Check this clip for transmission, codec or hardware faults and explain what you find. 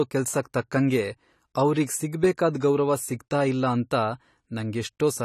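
The clip carries AAC compression damage from start to finish. The speech sounds dull and smeared, with a fizzy, warbling edge on sibilants. That fits likely AAC-LC coding at a low bitrate near 32 kbps, quantising coarsely. A spectrogram shows nothing above 14 kHz.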